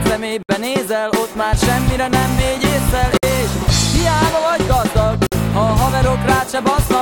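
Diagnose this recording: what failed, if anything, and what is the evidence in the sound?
Separately encoded pieces were joined without trimming each run's start-up delay and last-frame padding, leaving a gap at a join of encoded pieces. Continuous sound drops out for 63 ms at 0.43 s, 57 ms at 3.17 s and 53 ms at 5.27 s, with smeared edges, then resumes where it stopped.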